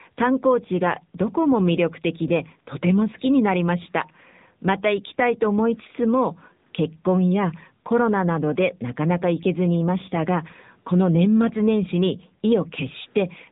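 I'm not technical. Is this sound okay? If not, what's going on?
No. From start to finish the speech sounds like an old mobile phone call: thin, muffled, with a buzzy, robotic edge. This is the AMR narrowband mobile codec, the speech squeezing used on older phone networks. It keeps nothing above about 3.8 kHz, which removes the crisp top end, and it rebuilds the voice from a simplified model, so the audio is rebuilt rather than passed through untouched. At this setting that rebuilding is plainly audible.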